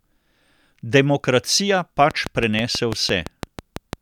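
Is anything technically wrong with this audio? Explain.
Yes. From 2.11 s to 3.94 s the speech is overlaid by a train of clicks, about ten sharp pulses at a steady six per second, peaking well above the speech level. The regular spacing and near-identical shape point to a repeating external source, likely electrical interference from nearby equipment or a faulty connection or power supply. That metronomic pace separates it from random vinyl-style crackle or a single dropout pop, which wouldn't tick evenly through the passage.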